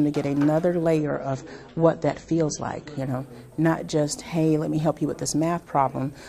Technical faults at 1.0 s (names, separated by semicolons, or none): adaptive stream at a lower bitrate